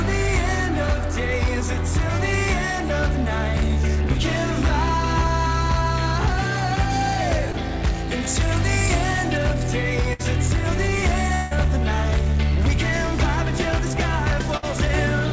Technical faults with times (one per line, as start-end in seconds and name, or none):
4.12-4.16 short concealed packet loss
7.52-7.55 short concealed packet loss
10.13-10.21 burst of packet loss
11.35-11.53 long network dropout
14.57-14.64 burst of packet loss